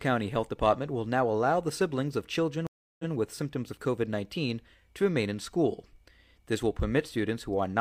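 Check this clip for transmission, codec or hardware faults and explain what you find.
There's one fault, a stream reconnect at 2.67 to 3.12 s, right after "allow the siblings of". The connection dropped, the player went silent for about a third of a second, then restarted its decoder mid-stream. Audio picks up 128 ms earlier, repeating a sliver before "with symptoms of".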